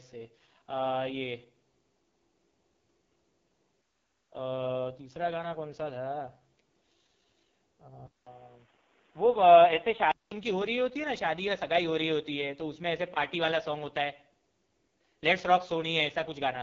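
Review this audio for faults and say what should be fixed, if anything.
The speech runs through the AMR wideband (HD Voice) codec at its lowest 6.6 kbit/s rate, where the pulse-driven vocal tract model has too few bits to work with. The result is heavy rough, raspy coding damage across the whole clip, with nothing above 7.5 kHz. To prevent it, negotiate 12.65 kbit/s or higher.

From 8.07 to 10.31 s the input likely switched to a poorer device, such as another microphone or a headset call profile. A gap of about 200 ms marks the switch, then the sound turns dull and boxy with nothing above 3.8 kHz. A new noise floor sits about 35 dB below the signal, while the level stays much the same. To prevent it, lock the input device so the system cannot change it during recording.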